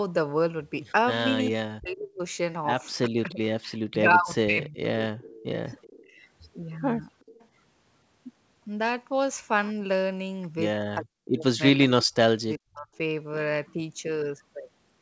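From 1.5 to 2.2 s the voice sinks sharply, by about 40 dB at its deepest, and it does so again across 3.07 to 5.6 s, where the dips come in pieces that add up to around two seconds. This is speech suppressed in double talk. Both ends were likely talking at once, and the echo canceller, unable to tell its own talker from loudspeaker echo, turned everything down.

Near the end of that stretch, at 5.27 to 5.44 s, a faint trailing copy of the voice appears, about 25 dB under the speech. It returns at 5.82 to 6.11 s and 7.2 to 7.48 s, about 30 dB down. This echo leak lags the original by 379 ms. It likely comes from a far-end loudspeaker whose microphone pickup was not fully cancelled and was sent back.

The voice is suppressed again from 10.97 to 11.45 s and from 11.73 to 12.89 s, about half a second and under a second of dips respectively, again reaching about 40 dB. Inside the second span, at 12.53 to 12.57 s, a brief scrap of echo slips through at about 35 dB down.

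Throughout, nothing is present above 8 kHz, which fits a G.722 call path at 64 kbps.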